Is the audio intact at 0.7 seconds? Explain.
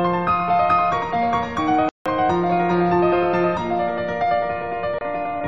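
Yes, at 0.7 seconds the audio is intact, with no dropout, click, distortion or other fault audible at that moment.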